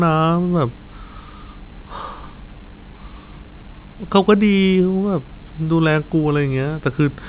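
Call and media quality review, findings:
Nothing stood out on listening to the speech in this recording.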